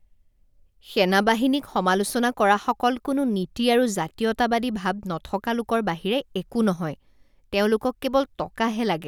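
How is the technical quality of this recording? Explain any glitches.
No technical glitches are audible.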